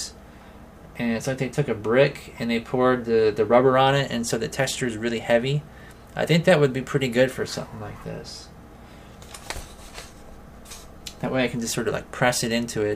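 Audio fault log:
No technical faults can be heard anywhere in the signal.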